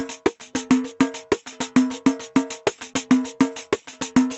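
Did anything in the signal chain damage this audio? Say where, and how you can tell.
Yes. Gain pumping runs through the whole clip: the level ducks by around 10 dB under every loud sound. The likely cause is excessive input gain driving a fast limiter.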